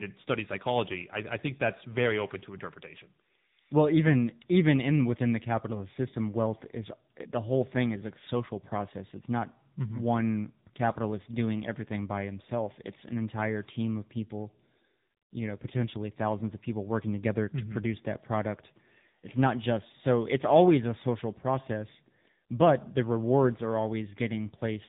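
Speech throughout, hit by tandem speech coding: the call was decoded and re-encoded at each link, with two speech coders in a row, the last sounding like low-rate AMR-NB. This leaves rough, muffled, warbly speech with nothing above 3.8 kHz.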